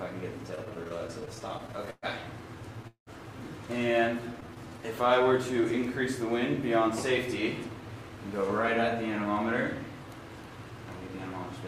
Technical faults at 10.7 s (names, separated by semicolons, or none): jitter buffer speed-up